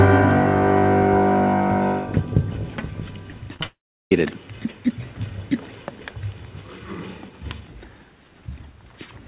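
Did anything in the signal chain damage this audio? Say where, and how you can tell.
Yes. Repeated packet loss (robotic sound) hits the network stage from 3.54 to 3.66 s: five short holes, the longest about 24 ms, each patched by extending the last sound. Over half that span is concealment, giving a choppy texture with pieces missing.

A long network dropout is the likely cause of what follows, from 3.66 to 4.12 s. The receiver stretches the last sound into a fading buzz, then holds near-silence for about 0.36 s, and the audio resumes with that stretch missing.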